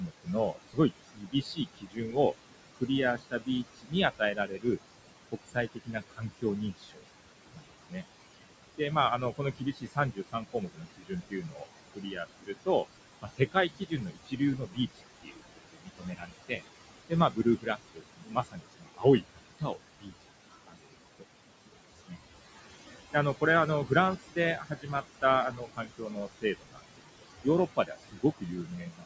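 A noise suppressor in the call chain is pulling down everything it judges to be steady background by about 20 dB, which leaves noise suppressor artifacts across the whole speech recording: the room noise, sitting only about 11 dB under the voice, dips away between phrases and swells back beneath them. The same suppressor also misreads parts of the voice as noise, causing speech cut by the noise suppressor from 0 to 2.16 s and again from 2.75 s to the end. In the first stretch roughly a second of sound is affected and in the second about ten seconds, with the deepest drops reaching about 21 and 22 dB. Quiet consonants and word endings there come out swallowed or faint. The call microphone processing keeps everything below 8 kHz.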